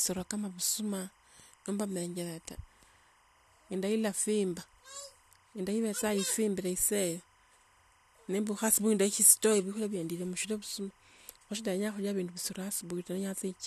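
Timecode bleed runs throughout the speech: a 25 frames-per-second linear timecode signal leaks in, chirping faintly between about 1 and 2 kHz, roughly 35 dB under the voice.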